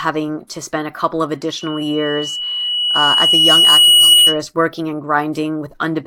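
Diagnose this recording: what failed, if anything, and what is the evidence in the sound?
What failed is loudspeaker feedback squeal in the analogue acoustic path, where the mic is hearing its own loudspeaker. Right after "spend a couple of", at 1.60 s, a single tone near 2.9 kHz appears and swells over roughly two seconds until it sits about 10 dB above the speech. It holds until 4.41 s, and the talking resumes with "working and". At 2.9 kHz the loop gain climbed past one, so that tone kept feeding itself.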